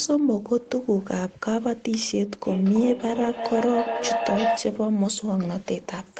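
From 2.45 s to 4.79 s the speech is joined by a feedback howl: a microphone-to-loudspeaker loop gains level on each pass, so the repeats grow rather than decay and narrow onto a tone near 700 Hz. The loop delay is roughly 300 ms, and the howl peaks at about 2 dB below the speech level before the loop is broken. The band is capped at 8 kHz, consistent with an Opus call path.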